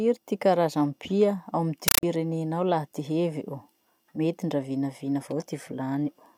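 At 1.88 s the speech cuts out for about 0.15 s, until 2.03 s, and a compressed stream gets played as audio. The encoded data, which fits an AC-3 stream, was treated as plain samples, so you hear loud, chattering static: 8 ms noise bursts at 31.25 per second.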